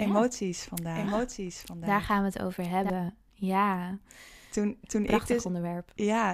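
From the very start until 2.9 s, a second copy of the speech trails the first by about a second, roughly 5 dB quieter, then cuts off abruptly. This doubled audio track is likely a second capture through a slower path.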